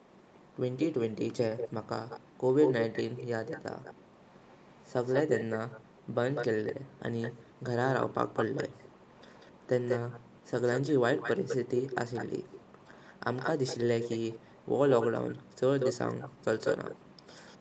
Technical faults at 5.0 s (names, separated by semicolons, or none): echo leak